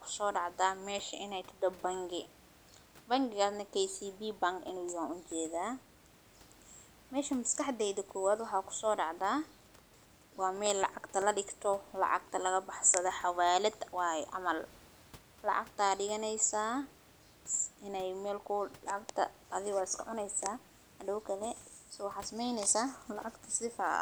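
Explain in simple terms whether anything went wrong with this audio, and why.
Between 10.31 and 11.48 seconds, just before "lacagta laga baxsado xawaalad", the speech is interrupted by CD scratch ticks: ten short clicks at a steady rate of roughly eight or nine per second, the longest lasting only a few milliseconds. Each tick is one pass of a scratch under the laser. The damage is too large for the disc's error correction to repair, so the player patches or silences those few samples, leaving a brief click. Faint room background is audible throughout, which is normal.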